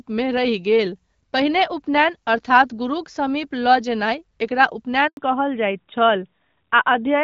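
A handover gap opens at 5.07 s and lasts 100 ms, until 5.17 s. While the call was being passed from one network to another, no speech frames got through. The speech fades out within a few tens of milliseconds into dead silence and resumes only when the new link comes up. Whatever was said in that tenth of a second is gone, leaving an abrupt hole in the speech.

A fallback to narrowband follows at 5.17 s and continues to the end. Up to that point the wideband HD Voice codec is audible, with the light coding texture expected of AMR-WB, which fits a 12.65 kbit/s mode. After the switch the call is carried by an older narrowband codec, most plausibly AMR-NB at 12.2 kbit/s. Nothing above 4 kHz survives, so sibilance and airy consonant detail disappear, and the speech sounds duller, boxier and rougher than before the break.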